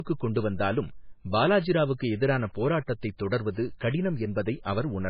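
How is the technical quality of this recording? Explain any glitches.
Not great, honestly: it sounds like low-bitrate audio saved at a high bitrate. All the way through, the speech has nothing above about 5.1 kHz, plus that swirly, smeared codec texture. That fits a likely 16 kbit/s MP3 later re-saved at 320 kbit/s, which can't restore what the first pass discarded.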